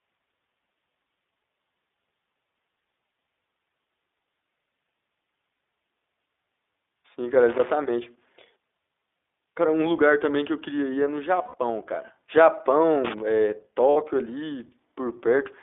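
Throughout, the iLBC codec confines the speech to roughly 300 Hz–3.6 kHz, so the spectrogram is empty above that band, and the sound is slightly rough and synthetic, consistent with 15.2 kbps, 20 ms frames. Lost iLBC frames at 5.56–5.60 s (40 ms), 11.42–11.55 s (120 ms) and 13.90–13.97 s (60 ms) become a held, buzzy vowel. The spectrogram shows repeated harmonic stripes, and in the waveform the level fades in the longest gap. Loose connector crackle at 7.49–7.72 s and 13.05–13.20 s is a brief irregular scratching, from a worn contact chopping the signal. It appears as dense vertical broadband spikes and jagged waveform dropouts.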